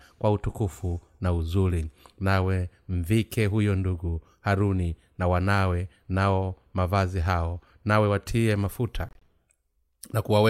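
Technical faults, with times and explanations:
9.09 to 9.23 s, corrupt frame muted: damaged bits in the compressed stream made the decoder reject a short run of frames, and the player filled the gap with silence, so the speech drops abruptly into a 0.14 s hole, which fits about six lost frames, while the timing afterwards stays intact.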